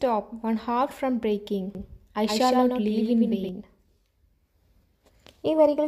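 From 1.75 to 3.49 s a doubled audio track appears: a full-band copy trails about a tenth of a second behind, roughly 5 dB quieter, likely from a second capture path, starting and stopping abruptly, showing as repeated transients on the waveform.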